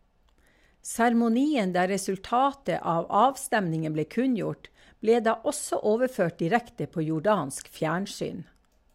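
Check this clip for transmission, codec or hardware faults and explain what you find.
No transmission, codec or hardware faults can be heard.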